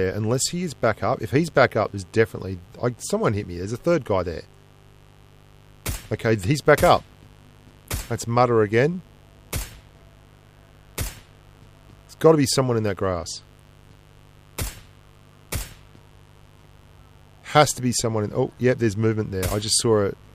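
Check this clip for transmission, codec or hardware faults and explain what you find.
One fault is present: mains buzz runs through the whole clip. Switching spikes from a dimmer, rectifier or poorly shielded lead enter twice per 50 Hz cycle, roughly 30 dB below the sound, giving a steady raspy buzz. A spectrogram shows evenly spaced harmonics of 50 Hz stacked into the kilohertz range; the waveform carries sharp ticks every 10 ms.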